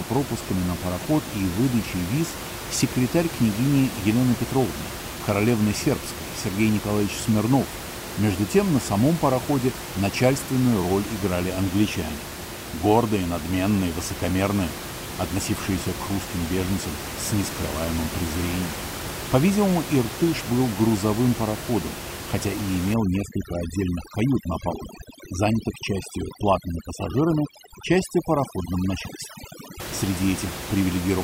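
From 22.94 to 29.80 s, overdone noise removal strips away quiet parts of the speech, while the room noise, about 10 dB below it, collapses into twinkling specks. A spectrogram shows scattered isolated dots.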